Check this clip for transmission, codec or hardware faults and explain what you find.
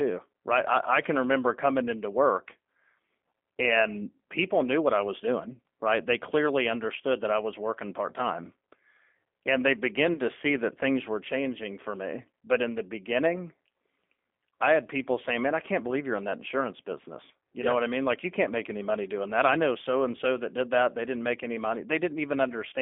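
Two faults are present in this speech clip: G.729 codec coding throughout, and one brief gap covered by codec concealment near 10.1 s.

The G.729 codec runs for the whole clip, and its damage is plainly audible. The decoder rebuilds speech from a vocal tract filter, a pitch predictor and sparse pulses, so the voice sounds rough and slightly synthetic, which fits 8 kbit/s G.729A. On a spectrogram, energy is confined to a band from about 250 Hz to 3.5 kHz, with clean cut-offs at both edges.

VoIP packet loss concealed by the speech codec occurs from 10.14 to 10.20 s, just before "to see that things". About 20 ms of audio went missing, and the decoder filled it by extending its last pitch and filter with falling gain. This produces a short stretched stretch of sound that fades. Because the next frames build on that guess, the sound stays weak or distorted as it recovers. On the waveform the envelope dips smoothly rather than dropping to silence. 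On the spectrogram, the last spectrum is held and fades.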